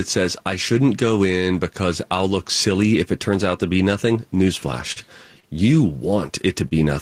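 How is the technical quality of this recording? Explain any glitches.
The speech has level pumping throughout and three brief network glitches late in the clip.

Gain pumping runs through the whole recording. The background swells in the pauses and ducks by around 5 dB under each loud syllable, likely from input gain set too high with a fast limiter pulling it back. A waveform shows a flattened envelope, and a spectrogram shows the noise floor brightening between phrases.

Short concealed packet loss occurs at 4.92–4.99 s. About 40 ms of audio never arrived, so the receiver extended the preceding sound and then crossfaded back into the real signal. It is heard as a brief smear or wobble. A spectrogram shows harmonics that are unnaturally steady or blurred noise across that slot.

Short stalls from a late packet occur at 5.40–5.46 s and 6.68–6.74 s. The jitter buffer ran dry, and the last sound was stretched by about 33 ms and then 29 ms until the data arrived, so nothing is lost. 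Each is heard as a held sound with a faint buzz or dip. They appear as a repeated, frozen spectral slice.

The room noise sits about 44 dB below the speech.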